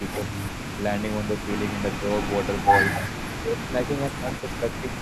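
From the start at 0.0 s to the end, a faint delayed copy of the speech runs behind it. This is an echo leak. The copy trails by about 291 ms and sits roughly 15 dB below the direct speech. It sounds like a ghost of the voice coming back. The likely cause is a loudspeaker on one side whose echo canceller let part of the pickup through.

Three short dips follow, each a case of speech suppressed in double talk. From 3.37 to 3.72 s the speech drops by around 15 dB. From 4.10 to 4.26 s there is a milder dip of about 5 dB. From 4.82 to 4.94 s it falls by about 10 dB. The likely cause is an echo canceller that heard both talkers at once and turned everything down.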